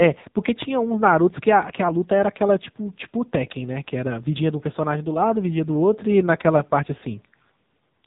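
Throughout, the speech has passed through an AMR narrowband mobile codec at a low bitrate, consistent with roughly 6.7 kbps, cutting everything above 3.8 kHz and leaving it heavily buzzy and synthetic.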